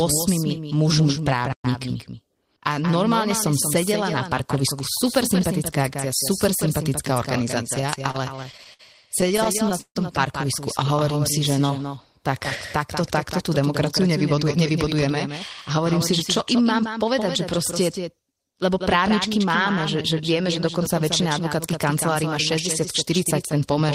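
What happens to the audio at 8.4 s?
At 8.4 s the audio is inside a burst of repeated stalls (stutter) running from 7.81 to 8.81 s. About ten short gaps open in that second, each one where incoming audio ran out before the next part arrived. The receiver covers each gap by extending the last sound, the longest bridge lasting about 57 ms, for roughly 171 ms of concealment in total, or 17% of the span. Nothing is lost, but the audio drags and stutters through that stretch.

The same moment also carries a doubled audio track that runs through the whole clip. A second full-band copy trails the original by roughly a fifth of a second at about 10 dB lower, with no decay or room colour, so it sounds like a flat, detached repeat rather than an echo. The likely cause is the signal being captured a second time by a slower path.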